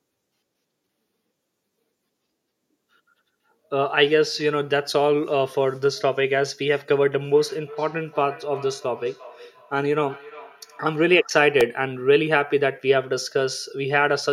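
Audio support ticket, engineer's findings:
Feedback echo between two devices, 7.33 to 11.42 s. Speech returns at roughly 0.3 s intervals, thinner and ringing, peaking about 21 dB below direct speech. A second device in the room is replaying this call. Its output re-enters the mic, uncancelled by local AEC.

Repeated buffer at 11.61 s. Brief click/buzz: one very short slice played three times with hard joins, consistent with a 1.33 ms, 64-sample buffer. Playback underrun, with the last buffer replayed while new audio was late. Roughly 3 ms of audio lost.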